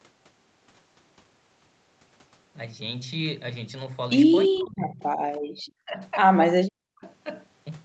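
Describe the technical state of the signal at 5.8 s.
At 5.8 s the speech is inside a sharp suppression running from about 5.75 to 6.0 s, with roughly a fifth of a second of it affected. The level falls by up to about 40 dB, so the voice is briefly pushed almost to silence. This is likely speech suppressed in double talk: with both ends active, the echo canceller could not tell this talker apart from loudspeaker echo and attenuated the near-end signal along with it.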